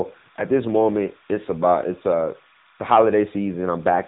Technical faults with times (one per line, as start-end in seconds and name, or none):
0.00-4.07 timecode bleed
0.00-4.07 AMR narrowband mobile codec